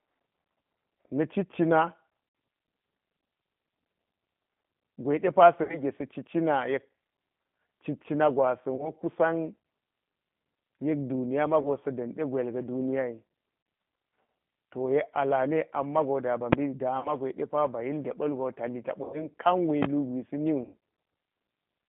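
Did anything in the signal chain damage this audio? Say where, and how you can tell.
Yes. The codec stage left the whole clip sounding rough and synthetic, which fits G.729 at 8 kbit/s. A spectrogram shows energy confined to roughly 150 Hz to 3.5 kHz, with a hard ceiling and nothing above. The pulse-based excitation gives the audio its rough, synthetic texture.

In the network stage, VoIP packet loss was concealed by the speech codec at 2.29, 5.63, 8.76, 11.62, 13.63, 17.0, 19.04 and 20.64 s, with gaps of 30 to 90 ms. The decoder repeats its last pitch and filter, so each gap is stretched into a buzzy tone or coloured noise that fades. The waveform shows a decaying stretch.

Invalid numbers at full scale hit at 16.53 s and from 19.83 to 19.85 s, probably in a processing stage where a calculation produced invalid values. The first is a single loud bang. The second pops at its start and end. 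On the waveform each one is a flat block at one extreme value, far beyond the audio's peaks, and the spectrogram shows a bright broadband stripe.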